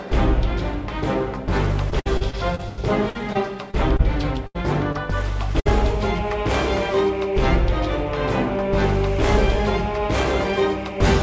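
From 1.90 to 4.01 s there's repeated packet loss, the robotic kind: ten separate gaps, the longest 87 ms, together about 17% of that stretch. Each hole gets patched by stretching the last bit of sound, then another arrives, so it comes out choppy, with 380 ms of audio simply gone.

Then a burst of packet loss at 4.47 to 4.56 s. About 80 ms never made it, and the receiver bridged it by carrying on the last sound while fading it down. The audio then jumps ahead, with that chunk missing.

Right after, at 4.92 to 4.96 s, there's a short concealed packet loss. Around 20 ms went missing, papered over with a quick continuation of the preceding sound before blending back in. It registers as a brief smear or wobble.

A second burst of packet loss hits at 5.60 to 5.67 s. This one is shorter, with about 60 ms lost, and it's the same story: a fading hold of the last sound, then a skip forward. Throughout, nothing sits above 8 kHz, which fits a wideband call codec like G.722.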